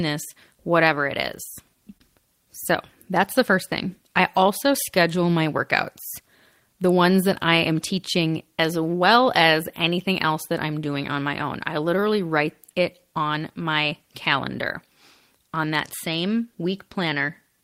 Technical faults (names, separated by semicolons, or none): none